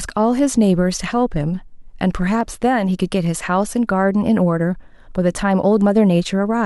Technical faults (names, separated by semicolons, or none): dropped samples